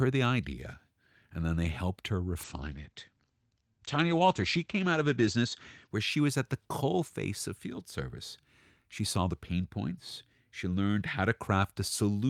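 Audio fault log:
2.44 to 5.93 s, call bitrate drop: After "then they helped her", the speech turns rough and muffled until "where she was at". The top end narrows from 20 kHz to 8 kHz for about 2.9 s. This fits an encoder falling from roughly 48 to 14 kbps.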